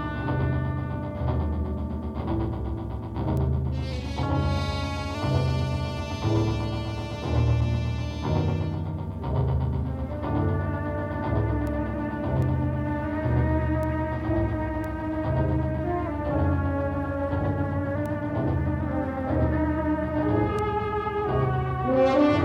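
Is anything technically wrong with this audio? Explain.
Yes. There are two kinds of fault.

Bit error spikes occur at 3.37, 11.67, 12.42, 13.83, 14.84, 18.06 and 20.59 s. At each, one to three samples jump by a power of two and return, giving a bright tick unrelated to the surrounding sound. Unlike a dropout click, nothing goes missing around it.

A drift correction step runs from 3.93 to 5.15 s and again from 16.06 to 17.95 s. The sound slows by 5.5% and drops about a semitone (99 cents), then snaps back. This is likely clock-matching software adjusting its buffer. The abrupt step distinguishes it from gradual tape wow.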